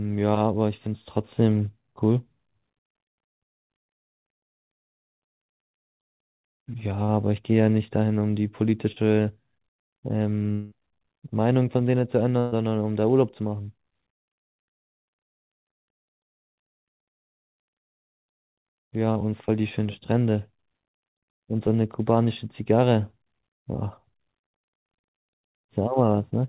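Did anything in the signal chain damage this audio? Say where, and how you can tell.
Yes, the network stage damaged it. At 8.92 s and again at 19.12 s there is short concealed packet loss. About 40 ms of audio never arrived, and the decoder bridged each gap by extending the preceding sound before blending back. You hear a brief smear or wobble. On a spectrogram, a strip roughly 40 ms wide shows harmonics or noise copied flat, blending back into the real audio. The waveform shows a copied patch rather than natural variation.

From 10.52 s to 10.74 s the sound is replaced for about 0.2 s by a continuation of what came before: a held buzz or hiss that weakens across the stretch. There is no true silence, and when the audio resumes the intervening material is simply gone. The likely cause is a long network dropout, concealed entirely by extrapolation. A spectrogram shows frozen, fading bands across that span, and the waveform shows a decaying envelope that joins abruptly to new material.

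From 12.39 s to 12.55 s a burst of packet loss removed about 120 ms. The receiver filled it by holding the last sound and turning it down, so it comes across as a sustained buzz or hiss that fades, followed by a jump forward in the audio. On a spectrogram this appears as horizontal, unchanging energy dimming over roughly an eighth of a second. The waveform shows a smoothly shrinking envelope. All of this sits within a band that stops at 4 kHz, consistent with the G.711 mu-law call path.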